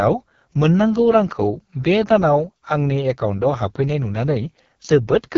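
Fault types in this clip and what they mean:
AMR wideband (HD Voice) codec: the speech has the rough, raspy texture of AMR-WB pushed to its bottom rate, which fits the 6.6 kbit/s mode. The pulse-driven coding damage is heavy throughout, and nothing comes through above about 7.4 kHz.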